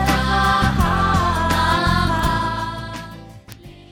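At 2.19 s a single sharp tick cuts through the sound. It is a bit error spike. One flipped bit threw one sample to about -13 dBFS, then it snapped back. A louder tick follows at 3.52 s, about -7 dBFS, broadband and unrelated to the audio.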